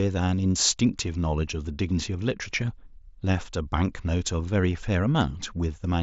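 No technical fault can be heard in the speech here. It carries the sound of an mSBC Bluetooth headset link, with content reaching up to about 8 kHz, a light grain on the loudest moments and faint upper bands that come and go.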